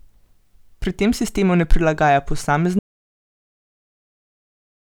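At 2.79 s the speech cuts out abruptly and the clip stays in complete silence through to the end, about 2.1 s later. This is an audio dropout to silence: no room tone or hiss survives in the gap, so the recording chain was still writing silence after its input disappeared. The likely cause is a lost input, such as a disconnected device, a failed link or an accidental mute. Whatever was said after that point is absent.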